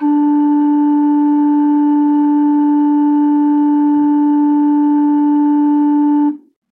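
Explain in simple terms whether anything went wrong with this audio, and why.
From 2.88 s to the end at 6.71 s, the music suddenly rushes ahead at about 1.4 times its earlier pace, while the pitch stays put. This is a time-stretched section, likely from software squeezing the audio shorter by dropping tiny slices.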